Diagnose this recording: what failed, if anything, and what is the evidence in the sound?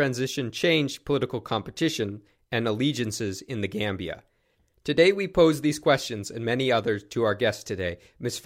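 Nothing failed in this recording, and the sound holds no evidence of a fault at any stage.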